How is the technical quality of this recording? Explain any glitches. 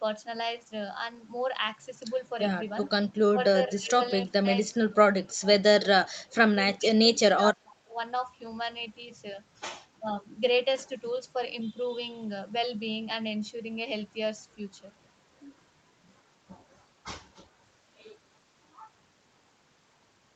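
The recording has clear call-path faults: a brief echo leak and repeated speech suppression during double talk, all in the first half of the clip. The audio carries nothing above 8 kHz, which fits a wideband Opus call at around 40 kbps.

Echo leak, 2.83 to 2.89 s: a short, faint scrap of delayed speech appears, trailing the original by 369 ms and sitting about 20 dB below the main speech. This is likely residual echo. The far end's loudspeaker output reached its microphone, its echo canceller failed to remove all of it, and the remainder was sent back down the line.

Speech suppressed in double talk, 2.95 to 4.34 s, 4.72 to 7.99 s, and 9.99 to 10.08 s: the speech level dips. The drops are deepest in the first stretch (about 30 dB, roughly half a second affected), then about 25 dB over roughly two seconds in the second, and a lighter dip of about 10 dB in the last. The likely cause is the echo canceller misjudging simultaneous talk as echo and attenuating the wanted speech along with it.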